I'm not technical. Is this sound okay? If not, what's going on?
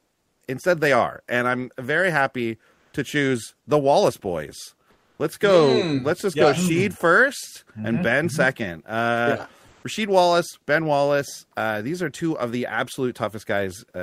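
No. In four short pauses between the speech, the real room sound drops out and a flat, featureless hiss takes its place: from the start to 0.41 s, at 2.73 to 2.93 s, 4.91 to 5.19 s, and 9.67 to 9.83 s. This is comfort noise in place of the background. The likely cause is a calling system that stops sending audio when nobody is talking, while the receiving end fills the gap with artificial noise.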